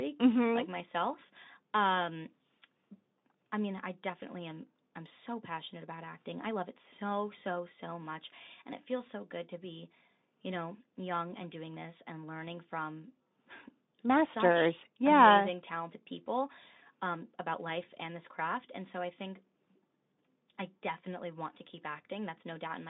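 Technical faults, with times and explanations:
No technical faults: the speech sits in a telephone-style band of about 200 Hz to 3.7 kHz with nothing above 8 kHz, which fits a Speex call path at around 18 kbps.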